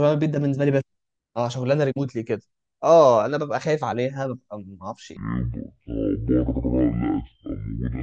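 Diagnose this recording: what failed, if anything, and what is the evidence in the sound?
Wrong sample rate at playback: from 5.17 s to the end, speech slows to half speed and drops a full octave, consistent with 44.1 kHz audio clocked out at 22 kHz without conversion.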